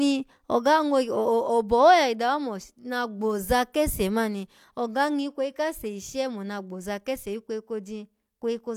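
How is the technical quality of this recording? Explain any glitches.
The technical quality of the recording is sound, with no glitches to explain.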